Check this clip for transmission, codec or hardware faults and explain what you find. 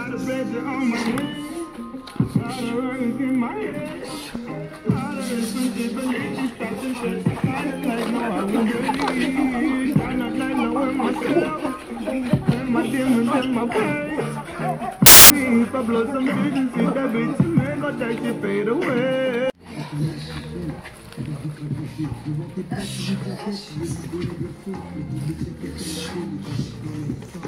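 One fault stands out. From 15.06 to 15.30 s, samples are built from the wrong bytes. Byte order or alignment slips, so noisy low bits dominate, producing a burst of loud, harsh broadband noise.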